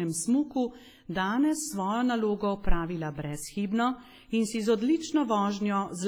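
Throughout, the speech rings and sounds washy, with hiss that breathes with the voice: heavy WMA compression, likely from an encode near 24 kbps. Long transform blocks smear quantisation noise across tens of milliseconds, and a spectrogram shows blurred onsets and patchy, emptied high bands.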